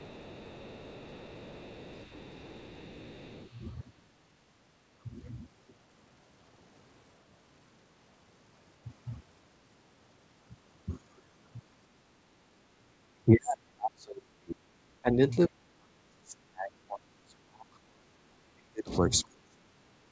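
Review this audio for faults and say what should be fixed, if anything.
From 0 to 3.5 s a faint second voice sits behind the speech, roughly 25 dB down. That is the other side's voice leaking through, likely residual loudspeaker echo the canceller missed. Preventing it takes better echo-canceller convergence or a headset.

From 12.54 to 15.19 s, for about two seconds in total, and again from 15.49 s to the end, the speech drops away in pieces. At worst it is roughly 40 dB and 35 dB quieter. This is speech suppressed in double talk, likely the canceller muting everything while both sides talked. A canceller with stronger double-talk detection would keep the talker through overlaps.

The call path's 8 kHz bandwidth limit, consistent with a G.722 wideband codec, is expected.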